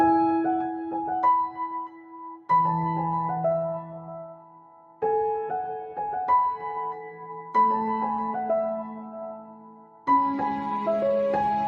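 The audio runs through a noise suppressor applied to music or sounds, a speech-tuned processor that treats sustained and ambient content as noise, so the gain swings by roughly 10 dB and the sound pumps and thins as held material is pulled down. The clearest cases of sound cut by the noise suppressor come at 0.71–0.95 s (about 6 dB down) and at 1.87–2.49 s, 4.26–5.02 s and 9.37–10.08 s (about 12 dB down each). In these spans sustained or decaying sound sinks or is cut short while sharper onsets pass.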